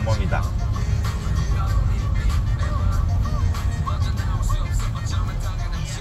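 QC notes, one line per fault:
No faults heard.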